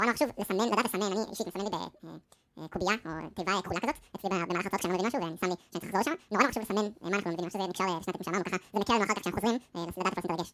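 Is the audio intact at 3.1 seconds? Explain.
No. The speech at 3.1 seconds, like the rest of the clip, suffers from a wrong sample rate: the samples are read out at twice the rate they were captured at, with no conversion in between, which fits 16 kHz audio being played as 32 kHz. Everything runs at 2.0 times normal speed and sits a full octave (12 semitones) higher, so the voice sounds thin, squeaky and rushed.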